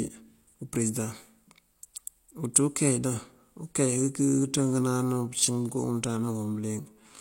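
From 4.21 s right through to the end, the speech shifts into a time-stretched section. The pace suddenly drops to about 0.7 times normal speed, but the pitch stays exactly where it was, so the talking drags without sounding any deeper. That pairing of a slowed pace with an unchanged pitch likely comes from software stretching the tail to fill a set length, padding it out by repeating short slices of the audio.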